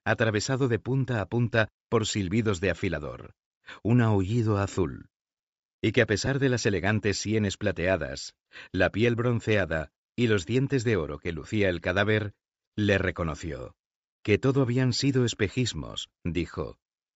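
Throughout the speech the upper spectrum sounds thinned and refilled with hiss, giving consonants and vowels a breathy, grainy edge that is plainly audible. This is likely Bluetooth LC3 compression. The transform coder runs short of bits, zeroes many high-frequency coefficients and substitutes shaped noise for them. The degree of damage fits a low rate of around 32 kbps with 10 ms frames.

There are brief gaps at 4.75 s, 6.26 s and 11.43 s, each about 10 ms long. Each one sounds like a short noisy smudge rather than a dropout to silence. These are lost LE Audio frames. At each gap the decoder covers the missing audio by repeating the previous frame's spectrum with randomised signs. That blurs the pitched structure into noise for one frame, which matches the single-frame length of each event. None lasts long enough for the concealment to fade out.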